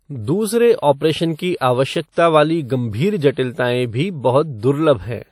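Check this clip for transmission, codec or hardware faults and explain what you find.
The clip has two faults: codec damage throughout and four pre-echoes.

Throughout, the speech has a ringing, washy quality, and the hiss swells and fades with the signal. Nothing is present above 17.2 kHz. This is likely WMA compression. The level of damage fits an early WMA encoder at about 48 kbps, where long transform blocks spread noise and weak detail is zeroed.

Pre-echo occurs at 0.80 to 0.83 s, just before "ऑपरेशन की"; at 1.36 to 1.39 s; at 2.12 to 2.17 s, between "ऑपरेशन की" and "वाली गंभीर"; and at 3.33 to 3.37 s, after "वाली गंभीर". Each sharp onset is preceded by a short hiss lasting 29 to 51 ms. The codec spreads the noise meant for the loud attack across the quiet moment before it, so these onsets sound soft and smeared.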